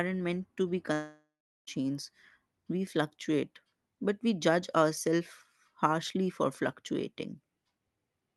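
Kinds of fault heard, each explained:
Long network dropout: Just after "meant to be", at 0.93 s, the speech turns into a buzzy continuation of its last sound that fades away, then near-silence for about 0.39 s, before speech resumes at 1.69 s with about 0.74 s simply missing, likely from packets that never arrived. A spectrogram shows the harmonics smearing into a decaying band, then a dark gap under the 12 kHz Opus ceiling. The waveform shows a shrinking envelope, then a flat line.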